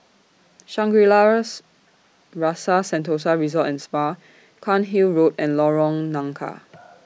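Speech recording with no audible technical faults anywhere in the clip.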